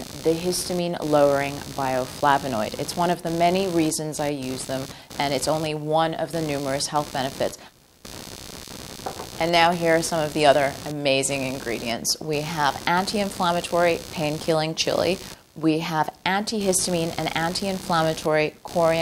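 From start to finish, computer activity noise sits under the sound: a buzzy, chirping pulse repeating roughly seventy times a second, some 15 dB below the signal. Shifting processor, graphics or mouse load is disturbing the ground the audio circuit shares with the computer. Unlike steady mains hum, which holds a fixed pitch, this pulse stutters, changes texture and comes and goes with what the machine is doing, ignoring the audio itself.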